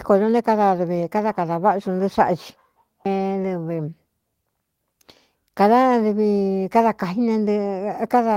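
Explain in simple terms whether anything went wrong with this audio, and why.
Short concealed packet loss at 2.15 to 2.32 seconds: about 20 milliseconds of the call arrived too late, so the receiver filled the gap by stretching the preceding sound, leaving a brief smear.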